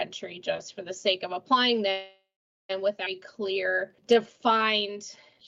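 From 1.91 to 2.71 s there is a call audio freeze: the last sound is stretched into a fading buzz or hiss, then about 0.45 s of silence, and the audio resumes where it stopped. The likely cause is held-up packets draining the jitter buffer. On a spectrogram, smeared horizontal bands fade into a blank column.

At 3.05 to 3.08 s the playback does a skip ahead. Around 0.4 s of audio is dropped and the two sides are butted together with a tiny fill, giving an abrupt jump. The waveform shows a sudden discontinuity, and the spectrogram shows mismatched patterns meeting at a vertical seam.

From 3.23 s to the end at 5.47 s, a jitter buffer slow-down runs the audio at about 89% speed, adding 0.26 s by repeating single pitch periods or bits of pauses. The pitch is unchanged, but sounds drag. Spectrogram features look horizontally stretched, and the waveform shows repeated near-identical cycles.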